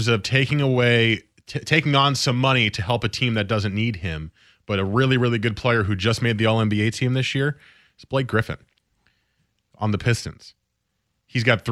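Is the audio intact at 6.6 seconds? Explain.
Yes, the audio is intact at 6.6 seconds, with no fault at that moment.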